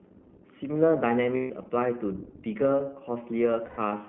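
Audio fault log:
throughout, iLBC codec: the speech is plainly rough and slightly synthetic, with a narrow line band from about 150 Hz to 3.4 kHz. Each short frame, which fits 20 ms, is coded on its own at a low rate that fits iLBC's 15.2 kbps mode.
1.36–1.52 s and 3.66–3.79 s, lost iLBC frames: the voice turns into a held, faintly buzzy, breathy vowel for 140 ms and then 120 ms. The decoder repeats the last pitch cycle mixed with noise, which fits seven and six lost frames, and speech recovers almost at once.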